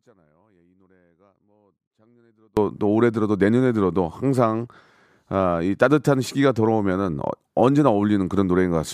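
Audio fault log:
0.00–2.57 s, audio dropout to a faint residue: speech already out at the start, only a faint leak about 35 dB down until it snaps back, likely a dropped feed on a live path.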